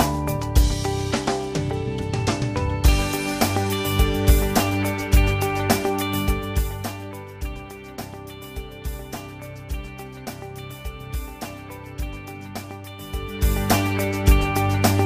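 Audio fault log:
Nothing wrong turns up here; the audio just runs along with no glitches worth noting.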